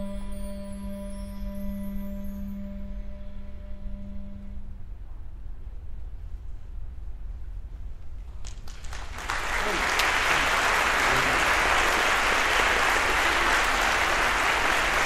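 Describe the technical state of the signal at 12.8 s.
At 12.8 s the signal is inside a train of clicks that runs from 11.66 to 12.98 s, likely caused by interference or a faulty connection injecting repeated pulses. About seven similar pops arrive unevenly, roughly 5.3 per second, ticking about 15 dB above the sound.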